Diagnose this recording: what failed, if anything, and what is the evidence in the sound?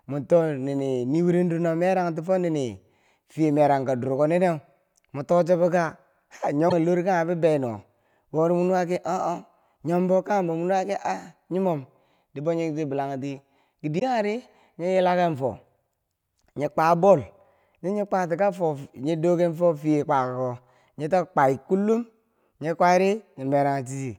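Codec stage: two brief glitches of about 40 ms, at 6.69 to 6.73 s and 13.98 to 14.02 s, break the speech. The likely cause is a broken MP3 bit reservoir: after lost frames of about 24 ms, following frames decode from the wrong borrowed bytes, and the sound skips forward.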